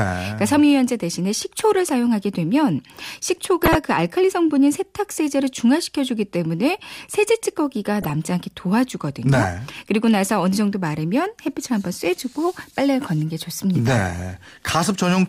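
DAB burbling appears at 3.63 to 3.75 s and again at 7.95 to 8.10 s. Under weak reception, a small fraction of a percent of bit errors slipped past error correction into the MP2 data. For a handful of frames, corrupted samples put short blips of noise into single sub-bands of the speech.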